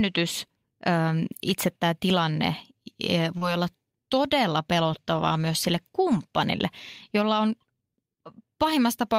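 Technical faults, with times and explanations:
3.37 to 3.43 s, short concealed packet loss: about 40 ms of speech never arrived, and the receiver covered 35 ms of it by extending the preceding sound before blending back. The result is a brief smear rather than the hard silent gap of an unconcealed dropout.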